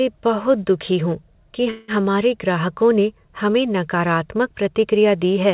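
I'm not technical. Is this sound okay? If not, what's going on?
No. A call audio freeze happens from 1.70 to 1.91 s. The speech stalls and holds on as a fading buzz for about 0.18 s. Then it resumes where it stopped. Nothing is lost, but it runs later. The likely cause is network data arriving late.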